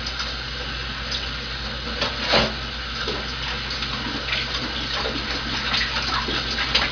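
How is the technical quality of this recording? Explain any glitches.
Nothing in the recording stood out as a technical problem on listening.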